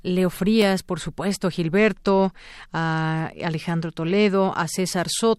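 At 1.77 s, just after "por supuesto", the speech goes dull and grainy until 4.34 s. This is a Bluetooth SBC bit pool drop: the link got congested and the encoder cut its bit allocation, which fits a fall from a bit pool of 28 to about 13, near 102 kbps. The highest sub-bands get little or nothing, so the treble collapses, and coarser quantisation of the remaining bands adds a gritty noise floor that clears when the rate recovers.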